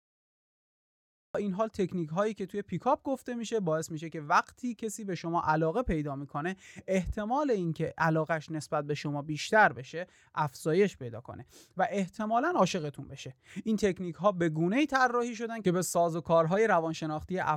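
From 0.0 to 1.35 s the clip holds digital silence, then the speech bursts in mid-sound at 1.35 s. This is a cut-off start: capture or streaming began late, so the first sound is already in progress with no natural onset or fade-in. What separates it from a quiet lead-in or a dropout is that the silence is dead flat and the speech resumes abruptly at full level, never rising into it.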